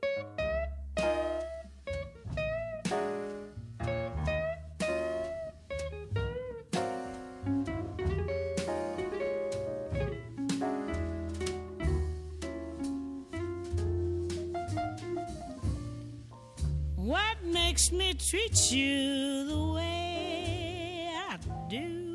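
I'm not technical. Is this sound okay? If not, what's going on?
Yes, nothing wrong here.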